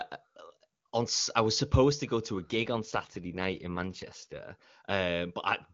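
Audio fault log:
2.43–4.39 s AMR rate drop: the codec fell to a low-rate mode, fitting roughly 8.85 kbit/s, so speech turns rough and synthetic with no gap and no narrowing.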